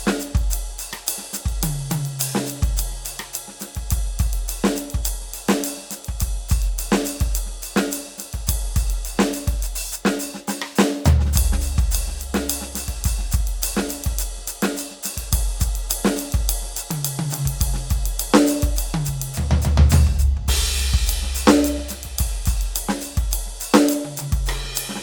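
The music comes through intact, with nothing in the signal pointing to any technical fault from beginning to end.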